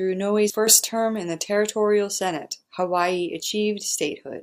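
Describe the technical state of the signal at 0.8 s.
At 0.8 s the speech and its background noise sit about 8 dB louder together, a sudden gain jump spanning 0.67 to 0.83 s, likely from digital gain switched without a ramp.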